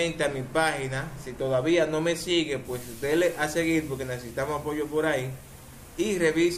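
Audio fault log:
No faults detected anywhere in the audio.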